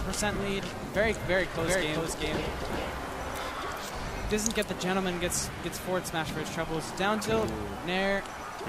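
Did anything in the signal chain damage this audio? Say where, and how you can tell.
Yes. A doubled audio track appears from 1.59 to 3.49 s, most likely because a second, slower capture path or an edit mixed in an out-of-step copy of the signal. A full-band duplicate trails the original by roughly 400 ms at nearly the same level, so every event is heard twice in quick succession. The repeat has no decay or room colouring, and it starts and stops abruptly at those times, which rules out natural reverberation.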